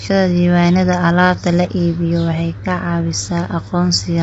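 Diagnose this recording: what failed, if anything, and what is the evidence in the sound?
The speech is rough and grainy throughout, with nothing above 7.8 kHz: a codec fault, likely low-delay AAC compression, whose short frames blur harmonics at low bitrate.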